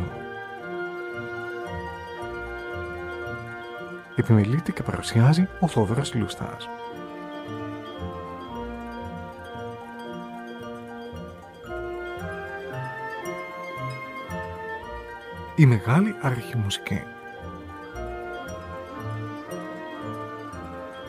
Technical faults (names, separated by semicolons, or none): none